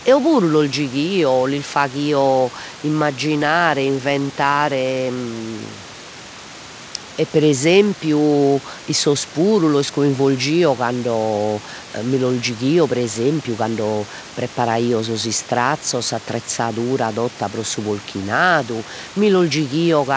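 A speech recording with nothing technically wrong with it.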